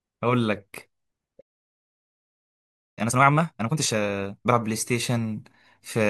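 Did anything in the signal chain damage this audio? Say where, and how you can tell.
Yes, in playback. At 1.40 s the speech just stops dead and stays silent until 2.99 s, about 1.6 s of nothing. That's a playback stall: the player most likely ran dry on buffered data or had its thread blocked, and output froze until it recovered.

Right after, from 2.99 to 4.55 s, the speech rushes along at roughly double speed but keeps its normal pitch. That's time-compressed catch-up: the player trims its backlog by cutting small slices and cross-fading the joins.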